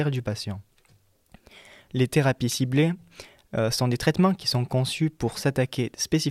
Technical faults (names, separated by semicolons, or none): electrical switching spike